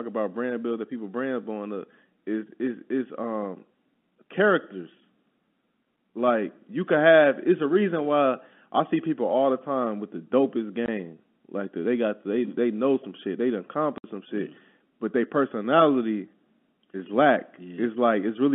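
Packet loss filled with silence cuts the speech twice: at 10.86–10.88 s, right after "time with the dopest", a 20 ms gap, and at 13.98–14.04 s, just before "some shit mm but", a 60 ms gap that fits three lost 20 ms packets. Each gap has hard edges. On a waveform they appear as flat silent stretches, and on a spectrogram as blank vertical bars across the narrow telephone band.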